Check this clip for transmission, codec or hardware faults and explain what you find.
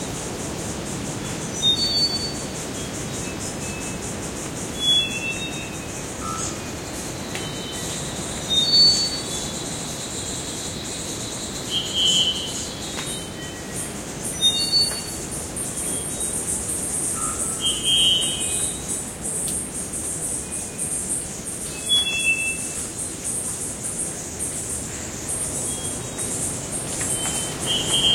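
One hardware fault stands out in this recording of everyday sound: a loud pop, heard as two quick pops between 18.24 and 18.30 s, peaking about 5 dB above the surrounding sound. This is likely a sudden voltage step or pulse, from a plug, switch, static discharge or driver glitch, entering the signal path and being shaped by the circuitry after it. Unlike a dropout or a codec glitch, nothing goes missing: the sound carries on underneath the pops without any gap.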